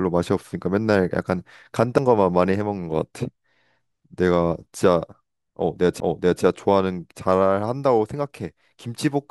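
At 1.98 s and 6.00 s, CD skips: a tick from a brief mute of a few milliseconds, then the sound resumes elsewhere, unlike a plain click or dropout.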